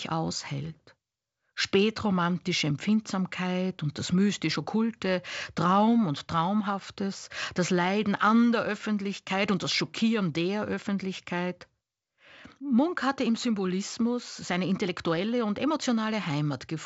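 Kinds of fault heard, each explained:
No fault can be heard in this speech clip. It comes through G.722 wideband telephone coding, with nothing above about 7.7 kHz and at most a faint trace of coding hiss, which fits the codec's full 64 kbit/s rate.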